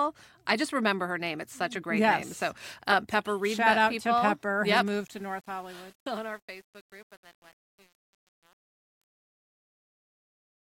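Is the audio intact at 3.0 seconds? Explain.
Yes, the speech at 3.0 seconds is intact, with no fault at that moment.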